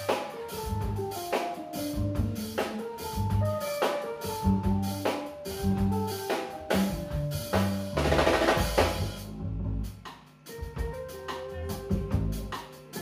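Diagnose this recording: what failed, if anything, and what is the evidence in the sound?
Nothing failed, and the sound gives no evidence of any fault.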